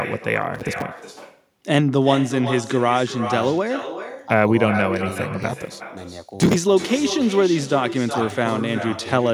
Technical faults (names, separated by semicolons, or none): echo with no canceller